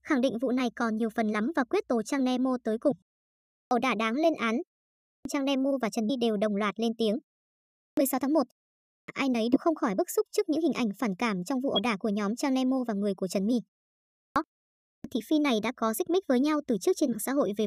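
At 2.90 s the decoder skips whole compressed frames, jumping past roughly 70 ms of speech. The same compressed frames skipped fault recurs at 6.09 s (around 100 ms lost), 9.52–9.57 s (about 50 ms), 11.73–11.78 s (about 70 ms) and 17.12–17.14 s (around 100 ms). Each time the speech lurches forward slightly.

Between these skips, the output device sleeps during silences of 0.3 to 0.48 s and has to wake again before it can play, producing a clipped start after a pause. This happens at 3.42–3.71 s, 4.97–5.25 s, 7.66–7.97 s, 8.79–9.08 s, 14.09–14.36 s and 14.73–15.04 s, each losing between 268 and 314 ms. Speech bursts abruptly out of silence with its opening sounds missing.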